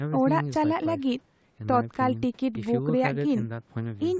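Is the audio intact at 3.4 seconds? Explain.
Yes, the speech at 3.4 seconds is intact, with no dropout, click or distortion, and the lack of content above 8 kHz there is simply the normal band limit of the call microphone processing.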